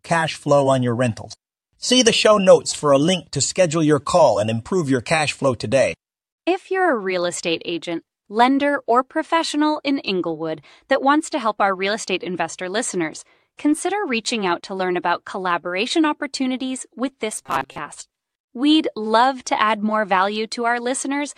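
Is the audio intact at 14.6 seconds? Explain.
No. AAC frame loss with muting leaves a 20 ms hole at 14.61–14.63 s. The overlapping windows fade the zeroed frames out and in, so the hole has soft edges.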